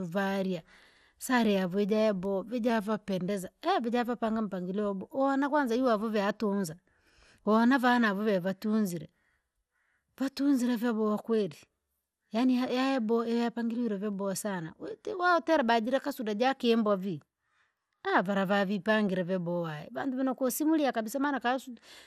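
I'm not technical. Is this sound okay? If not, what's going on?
No. Throughout the speech there is MP2 compression damage: it sounds dull and gurgly, with nothing above about 15 kHz. This is likely from saving it in a digital-radio-style format that cuts off the top of the sound and coarsens what remains.

There are also two drift correction steps. From 2.70 to 3.29 s, right after "varia sare yavujabo", the speech slows by about 6% and drops about a semitone, then snaps back. From 19.96 to 21.04 s, after "vanavipangile veboha", it speeds up and rises by the same amount. This is likely software briefly changing the playback speed to keep two clocks in step.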